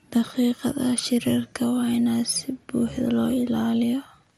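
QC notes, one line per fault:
throughout, MP2 compression: speech sounds dull, gurgling and grainy; likely MPEG Layer II coding at a low rate, fitting 80 kbps, shutting off upper sub-bands.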